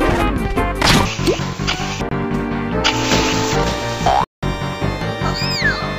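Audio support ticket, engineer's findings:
Two short silences: 2.09–2.12 s (about 23 ms) and 4.24–4.43 s (about 186 ms), abrupt or briefly faded edges, sound picks up further on as if it kept playing. Likely Bluetooth dropout, late packets discarded at the headphones; gap lengths fit roughly one and eight lost packets.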